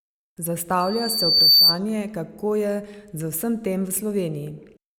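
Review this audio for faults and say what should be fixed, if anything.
A loudspeaker feedback squeal comes in at 0.80 s and runs to 1.79 s: a single 4.6 kHz tone that swells over most of that second until it sits roughly 10 dB above the speech. The mic is hearing its own loudspeaker, and at that frequency the loop gain tops one. To prevent it, pull the speaker away from the mic or notch out 4.6 kHz.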